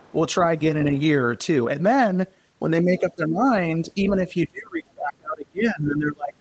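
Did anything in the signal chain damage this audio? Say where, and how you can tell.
Yes. The damage is in the call processing stage, specifically the echo canceller. From 0.0 to 0.13 s, at the very start, a faint second voice sits under the speech, roughly 30 dB below it. The other side's voice is leaking through: the far end was playing on a loudspeaker, and this is likely residual echo the canceller failed to subtract from the microphone signal before the Opus encoder, whose 8 kHz bandwidth limits all of the audio.

Speech is suppressed in double talk in three places. From 2.83 to 3.43 s the voice drops by as much as about 15 dB, over a total of around a third of a second. From 3.78 to 4.14 s there is a milder dip of about 5 dB. From 4.33 s to the end, the level falls by as much as about 30 dB. The likely cause is the canceller's suppressor attenuating the near-end talker while it treated the overlapping far-end signal as echo.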